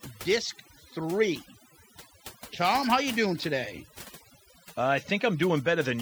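From start to finish the background is pulled down and breaks up into small twinkling specks. This is overdone noise removal: a noise reduction stage was pushed too hard, so individual frequency bands close to its noise estimate were cut deeply or switched off altogether. The quieter parts of the voice sat near that estimate and were stripped away along with the noise.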